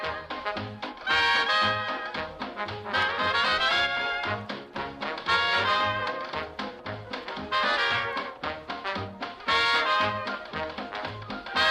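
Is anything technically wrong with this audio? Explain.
No, nothing technically wrong turns up here; it all sounds as it should.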